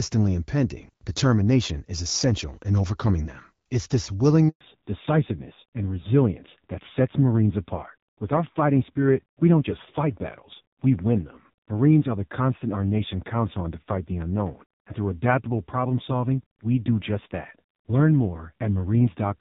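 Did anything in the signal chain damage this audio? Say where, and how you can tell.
Yes. A handover gap sits in the network stage, from 4.49 to 4.61 s: the speech fades out within a few tens of milliseconds and a 120 ms stretch of true silence follows before sound resumes. Nothing arrived while the call moved between networks, so that speech is simply missing. A clean fade to dead silence, rather than clicks or stuttering repeats, separates this from buffer underruns or packet-loss concealment.

The gap is followed by a fallback to narrowband in the codec stage, from 4.61 s to the end. Before the switch the speech carries HD Voice brightness consistent with AMR-WB around 12.65 kbit/s. After it, everything above 4 kHz is gone, and the sound turns duller and raspier, which fits AMR-NB near 5.9 kbit/s. It is not a simple low-pass filter, because the roughness comes from the low-rate codec itself.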